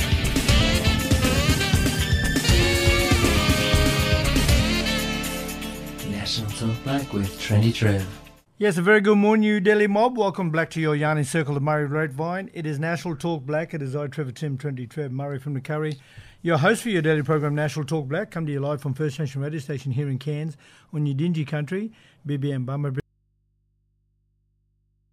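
The wanted signal was likely lost at 23.0 s while the path after the break stayed live, giving an audio dropout to a faint residue. The sound cuts off abruptly, not fading, and never returns. Only mains hum remains to the end, about 45 dB below the signal.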